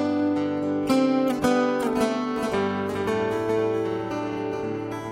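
From 2.36 s to the end of the clip, a doubled audio track appears. A second full-band copy of the sound abruptly joins at a fixed lag of roughly 0.4 s and sits about 5 dB below the original. It carries no decay or room colouring, so it reads as a distinct, hard-edged repeat rather than an echo. The likely cause is the signal being captured again through a slower path and mixed back in.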